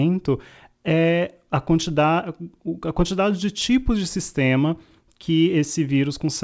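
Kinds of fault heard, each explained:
No faults heard.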